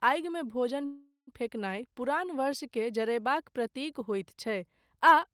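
At 0.85 s, after "आगिमे भोजन", the speech stalls in a call audio freeze until 1.30 s. The last sound smears into a fading buzz, then about 120 ms of silence. Speech resumes at "फेकनाय पुरान" with nothing lost, just delayed about 420 ms. Likely cause: late packets draining the jitter buffer.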